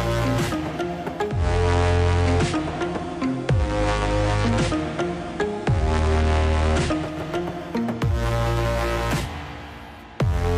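From 1.25 s to 7.22 s the audio shows digital radio blending to analogue: the receiver cross-fades over about 0.2 s to the station's FM feed, bringing faint hiss roughly 35 dB below the signal and a level shift of about 1 dB.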